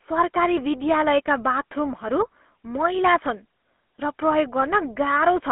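GSM full-rate codec damage runs throughout: pulse-excited vocal-tract modelling, fitting a 13 kbps stream, gives the speech a buzzy, gravelly roughness, confined to roughly 250 Hz to 3.4 kHz, with nothing above 3.8 kHz.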